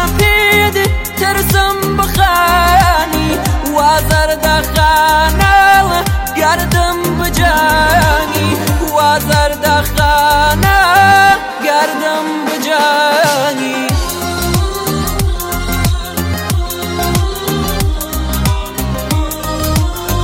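No technical fault can be heard anywhere in the audio. Nothing in the sound calls for a cause to be traced or a moment to be marked.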